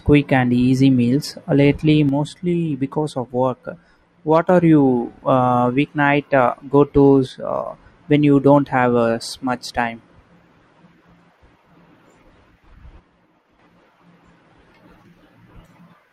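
The speech level drops abruptly by about 6 dB from 2.09 to 4.49 s, 7.27 to 7.66 s and 13.00 to 13.59 s, then snaps back. The likely cause is one channel dropping out. Once the channels are summed to mono, only half the shared signal remains.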